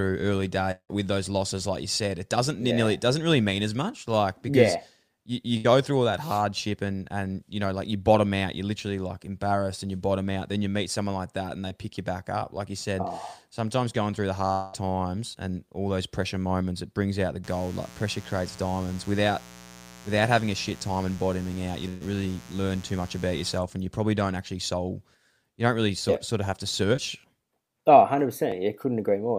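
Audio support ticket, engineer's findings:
Long network dropout, 0.71–0.91 s, just before "with those losses like". Probable component: likely the network path. About 180 ms lost. The decoder extends the last sound, which fades into about 90 ms of silence before audio resumes. A second gap at 14.52–14.75 s loses about 200 ms and is filled throughout with a fading continuation, with no silence.

Burst of packet loss, 5.57–5.66 s and 21.88–22.03 s. Jitter buffer/decoder concealment. About 80 ms and 120 ms missing. The last sound is held and turned down, then playback jumps ahead.

Short concealed packet loss, 11.68–11.72 s, 15.33–15.36 s, and 26.97–27.00 s after "sort of have to". About 20 ms missed each time. Concealment causes a brief smear or wobble.

Mains buzz, 17.44–23.59 s, from after "it brings out the" to before "and you probably don't". A dimmer, rectifier or missing shield lets in switching spikes. 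60 Hz harmonics give a raspy buzz about 20 dB below the signal.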